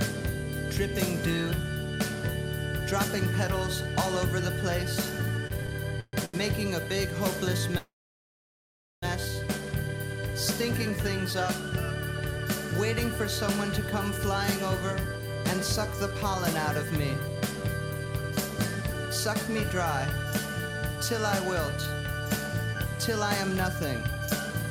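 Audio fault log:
5.47–6.37 s, repeated stalls (stutter): five brief gaps, longest 132 ms, filled by continuing the last sound; about 29% of the span is concealed, so it drags and stutters.
7.78–9.05 s, call audio freeze: playback halts for 1.25 s, the held sound fading to near silence, likely from packets delayed in transit, then resumes where it stopped.
16.90–18.95 s, jitter buffer speed-up: audio runs at 104% speed with pitch unchanged as the receiver trims roughly a tenth of a second of pitch periods.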